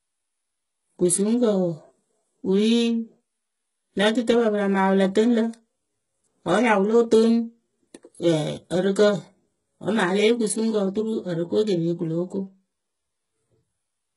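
HE-AAC compression runs throughout the speech, heavily. The treble sounds rebuilt rather than recorded: s sounds come out gritty and lispy. That points to a bitrate near 12 kbps, likely with upper bands copied from lower ones.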